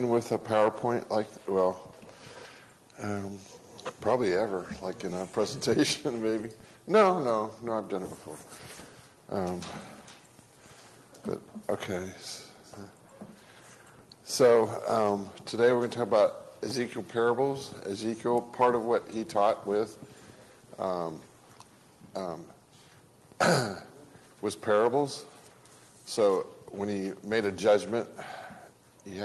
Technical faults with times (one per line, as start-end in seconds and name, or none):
none